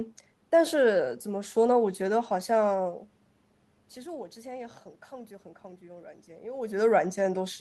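Nothing here counts as a technical fault: the background noise is just the room, the level dips and swells around 3 s and 6.5 s are the talker shifting relative to the microphone, and the top end stops near 12 kHz because the speech came through a call codec.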